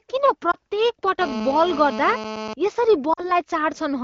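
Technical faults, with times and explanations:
0.51 to 0.55 s and 3.13 to 3.25 s, lost AMR speech frames: at 0.51 s there's a quick dip or warble, which fits one lost 20 ms frame. The later gap sounds like about 40 ms concealed, so the decoder stretches the last pitch and vocal tract settings, the sound fades, and then it comes back a bit rough.
1.21 to 2.54 s, GSM phone buzz: a harsh, raspy 217 Hz buzz with lots of harmonics sits about 10 dB under the signal. A nearby 2G handset's radio bursts are being rectified in the audio circuit. It stays nearly steady, as you'd expect from a phone on a call, and it cuts through the clean-sounding AMR-WB wideband audio.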